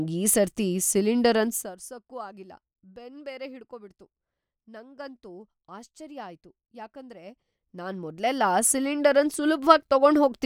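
From 1.43 to 1.79 s, just after "ಈ ಸರ್ತಿ ಸಿಲಿಂಡರ್" and before "ಆಗಿಲ್ಲ ಬೆನ್ ಬೇರೆ ಹಿಡ್ಕೋ", the speech fades down by roughly 20 dB with zipper noise. The gain moves in unsmoothed 1 dB jumps, about a hundred per second, and each jump leaves a tiny click, so a fine ticking rides on the fade. That rapid ticking is what separates it from a smooth, continuous fade.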